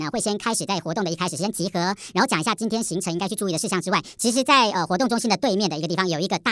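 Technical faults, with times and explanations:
Throughout, wrong sample rate. The speech runs 1.5 times too fast and sits seven semitones too high. Speed and pitch shift together by one ratio. The samples play faster than they were captured, without conversion. That fits 16 kHz audio played back at 24 kHz.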